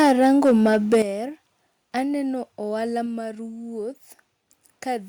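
From 0 to 1.02 s the loudest syllables crackle harshly. This is likely microphone overload: input about 6 dB too hot, flattening a small share of peaks. At 1.02 s the speech and background suddenly drop by about 10 dB, likely the microphone volume stepped down by the call software.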